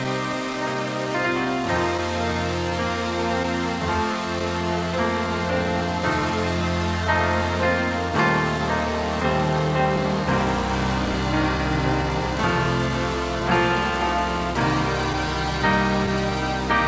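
Through the whole 17 s the sender's clock runs roughly 2 percent slower than the receiver's. This is clock drift between sender and receiver. Because audio arrives a little late, the receiver's jitter buffer keeps drifting toward empty and has to be topped up, so the timing never settles and small hitches recur unevenly across the clip rather than at one fixed point.

From 0.04 to 4.42 s there are scattered short gaps: about five packets went missing or arrived too late, spread singly through that stretch. The receiver covered each hole by extending the preceding sound, the longest patch only around 10 ms and the total about 50 ms, roughly one percent of the span. They come through as brief ticks or tiny smears in otherwise clear audio.

From 0.33 to 16.31 s the receiver makes repeated timing corrections to stay in step with the slow sender, repeating short fragments so playback runs at 98 percent speed. 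All the edits lengthen the sound, adding somewhere around 0.3 s in total, but they are unevenly spaced. Nothing sits above 8 kHz, which fits a G.722 wideband call path.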